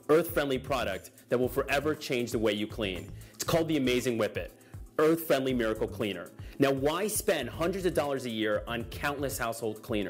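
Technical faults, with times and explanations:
No technical faults are audible.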